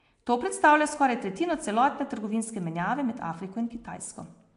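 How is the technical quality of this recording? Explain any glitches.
The recording is clearly degraded by Nellymoser compression throughout the speech. The whole clip has a rough, hissy halo and a smeared, underwater quality, consistent with the Flash-era Nellymoser Asao codec at a rate that fits about 44 kbps. That is the likely cause. The coder spends a fixed, small bit budget on short blocks, leaving weaker bands empty and filling them with noise. On a spectrogram, nothing appears above 10.6 kHz, and the bands below show speckled noise and blurred harmonics.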